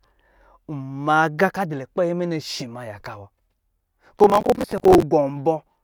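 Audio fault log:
4.19–5.02 s processor overload crackle: the processor falls behind, missing dozens of deadlines on what sound like 10 ms buffers; stale audio repeats with hard edges, heard as gritty crackle.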